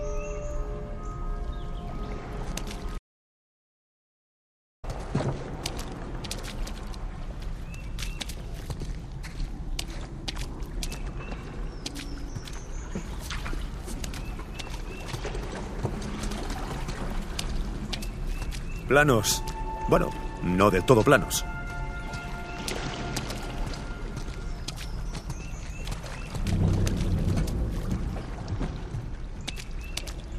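The input feed to the recorder was most likely interrupted, through a lost device connection, a broken link or an accidental mute, while the recording carried on writing silence. The result is an audio dropout to silence from 2.98 s to 4.84 s, lasting about 1.85 s. The sound cuts off abruptly and then resumes just as suddenly, and the gap between is dead silence with no trace of background noise. Whatever occurred during that stretch is missing from the audio.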